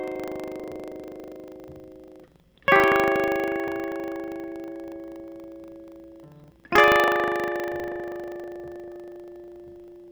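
Buffer tearing runs through the whole music clip. The program filling the ring buffer and the hardware reading it have drifted out of step, so they cross inside every period. A small slice of each buffer, roughly a twentieth, still holds audio from about 150 ms earlier. Hard joins sit on both sides of that slice. The result is a steady rattle at 25 Hz, which points to a buffer period of 40 ms. It is present only while the music plays.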